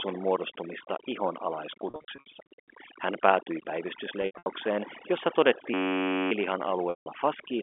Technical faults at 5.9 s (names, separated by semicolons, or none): overdone noise removal; system hang loop